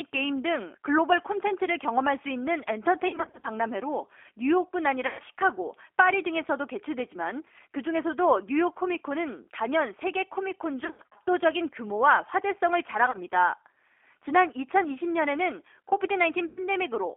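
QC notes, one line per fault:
Throughout, G.729 codec: 8 kbit/s speech rebuilt from filter and pulses, band squeezed to 300 Hz–3.4 kHz, so everything sounds plainly rough and a bit synthetic.
3.08–3.47 s, 5.07–5.22 s, 10.85–11.22 s, 13.06–13.17 s and 16.48–16.60 s, VoIP packet loss concealed by the speech codec: the decoder stretches its last pitch into fading buzz, and the audio stays weak briefly afterwards.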